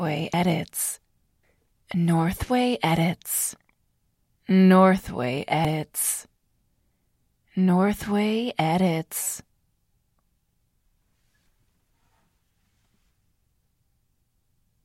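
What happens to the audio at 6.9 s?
Nothing goes wrong at 6.9 s; the audio runs through that moment intact, with no dropout, click, glitch or other fault.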